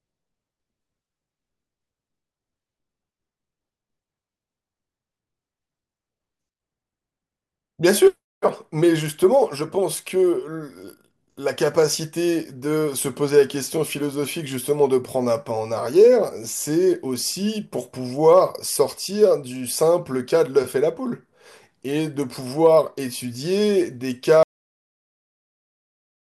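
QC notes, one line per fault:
24.43–26.21 s, cut-off end: the speech stops abruptly at 24.43 s, partway through a sound, and the remaining 1.8 s is flat digital silence. There is no decay, room tail or fade, just an instant drop to silence. That points to the final buffers never being written or played out, so the recording simply ends where the last buffer that was written stopped, rather than at a natural pause.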